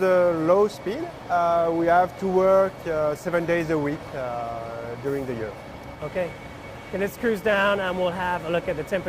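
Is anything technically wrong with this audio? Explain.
No, nothing technically wrong can be heard here.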